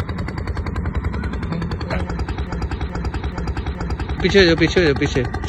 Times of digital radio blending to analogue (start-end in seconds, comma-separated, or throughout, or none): none